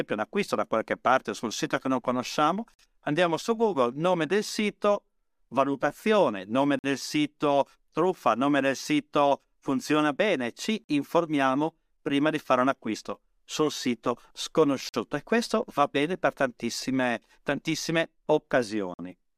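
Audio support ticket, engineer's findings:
Gap between chunks in the speech. 50 ms silences at 2.74, 6.79, 10.84, 14.89 and 18.94 s. The regular spacing fits 4 s chunks. Probable component is the chunk join in playback or storage. Silence is inserted at each boundary, with no audio lost.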